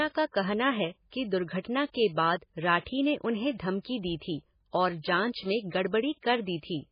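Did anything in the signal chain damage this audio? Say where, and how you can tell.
Yes. Throughout the speech the sound is watery and swirly, with metallic chirping on s sounds and smeared consonant onsets. Nothing comes through above about 5.1 kHz, so the top end is dulled. The damage sits at the codec stage and is likely heavy MP3 compression. Starved of bits, the encoder cut the treble at a fixed frequency and zeroed weak lines that flicker frame to frame, which fits a very low bitrate around 16 kbps.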